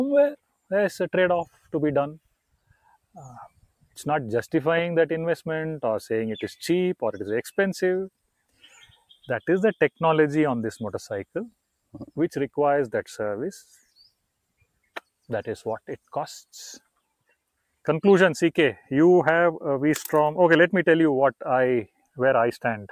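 The sound dips at 1.47–1.73 s, 2.52–3.16 s, 3.48–3.98 s, 8.28–9.26 s and 13.64–13.88 s, sinking by up to about 20 dB. These are sounds cut by the noise suppressor, which mistook parts of the wanted signal for noise and turned them down.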